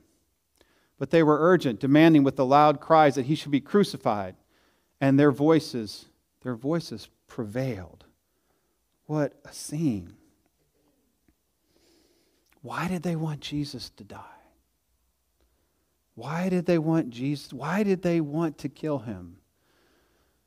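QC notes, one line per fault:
No faults heard anywhere in this speech recording.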